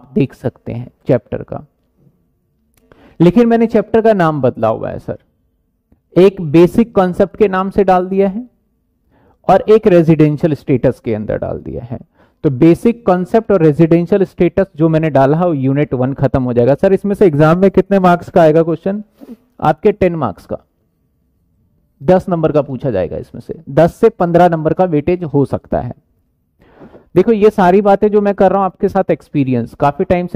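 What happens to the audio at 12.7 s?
Nothing goes wrong at 12.7 s; the audio plays through that moment intact, with no dropout, click, distortion or other audible fault.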